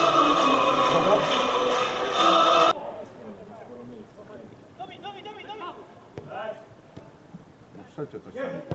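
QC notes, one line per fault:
No faults: the signal carries the normal character of a call microphone chain and an Opus call path, with the lowest bass trimmed and nothing above about 8 kHz, a wideband limit that fits a call codec running at a moderate bitrate.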